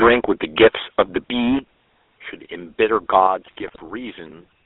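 A buzzy, gravelly roughness runs through the whole speech clip, with the band held to roughly 300 Hz to 3.5 kHz. That is the GSM full-rate codec, and its coarse pulse-driven vocal-tract model fits a 13 kbps full-rate encoding, leaving the damage plainly audible.

From 0.01 to 1.59 s the loudest syllables carry a harsh, crackling edge with flattened peaks. This points to microphone overload, likely from an input volume set too high, driving peaks about 10 dB past the converter's limit and chopping off a few percent of samples.

At 0.04 s the voice and background drop together by about 3 dB in a single sudden step. This sounds like the microphone volume being stepped down, with the call software likely lowering the input gain once it detected the overly hot signal.

Between 3.46 and 3.80 s the voice breaks into squawks, pops and gargling. These are GSM bit errors: corrupted filter, pitch and gain values distort the spectrum frame by frame. 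The span fits about seventeen 20 ms frames hit at roughly a 2 percent bit error rate.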